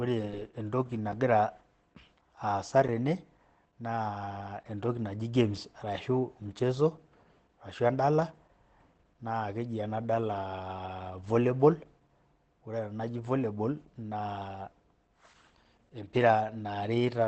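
Throughout the speech, Opus voice compression is running its SILK coder in wideband mode at a low bitrate, consistent with about 12 kbps. The excitation is coded coarsely and nothing survives above 8.8 kHz, so the speech sounds plainly muffled, hoarse and slightly robotic.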